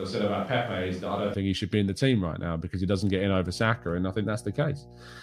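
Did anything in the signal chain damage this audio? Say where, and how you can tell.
Yes. From the very start until 1.34 s, just before "think he should be", there is a switch to a distant microphone. The sound is hollow and roomy, several dB quieter, with audible room noise. The close capsule likely dropped out at the capture stage.

Mains hum enters at 2.91 s, right after "right now because he", and lasts to the end. It is a steady 60 Hz tone, well below the speech. This points to the analogue wiring, where a ground loop couples the power line in.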